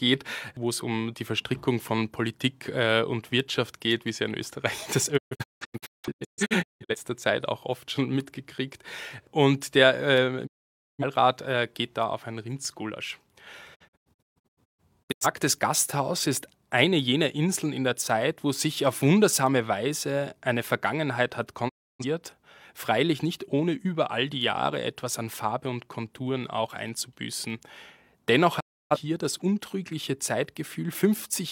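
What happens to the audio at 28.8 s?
A digital broadcast dropout mutes the speech from 28.59 to 28.97 s: lost or corrupted frames make the receiver fade out in about 20 ms, losing roughly 0.3 s before sound returns.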